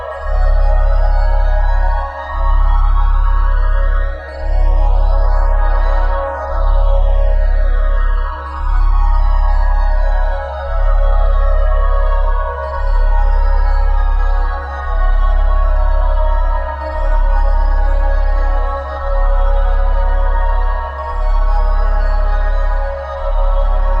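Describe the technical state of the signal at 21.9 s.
Channels drifting apart, throughout. Clocks differing by roughly 300 ppm slide the delay toward about 5 ms here. Summed to mono, it flanges slowly.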